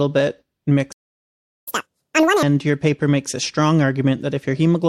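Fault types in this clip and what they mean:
Playback stall: The speech cuts to silence at 0.92 s and stays silent for 0.75 s. The player likely ran out of data, then resumed.
Catch-up at higher speed: From 1.68 to 2.43 s the speech plays at double speed, pitched up nearly an octave, to win back time, starting on "your paper makes a".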